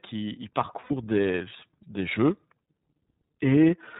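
The iLBC codec colours the speech from start to finish. It is a narrowband voice codec, so nothing above 4 kHz survives, and the speech sounds boxed-in and slightly rough and synthetic. This damage is plainly audible throughout. The grain suggests the 13.33 kbps mode with 30 ms frames, where each frame's excitation is coded on its own, with no help from the frame before.

Lost iLBC frames occur twice. From 0.80 to 0.91 s, about 90 ms goes missing, which fits three 30 ms frames. From 2.63 to 2.69 s, 60 ms is lost, which fits two. In each gap the decoder repeats the last pitch cycle blended with noise. The result is a held, faintly buzzy vowel rather than silence. Because each frame decodes independently, the speech snaps back almost at once as soon as packets resume.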